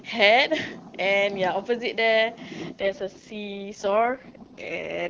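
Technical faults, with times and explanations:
2.80 s to 5.10 s, AMR rate drop: the speech turns rough, raspy and synthetic-sounding from 2.80 s to the end, with no gap and no narrowing of the band. Before that the AMR-WB coding is clean, and the change in texture points to the network switching the codec from its top 23.85 kbit/s mode down to its lowest 6.6 kbit/s mode. That mode spends more of its bits on error protection and leaves too few to model the speech finely.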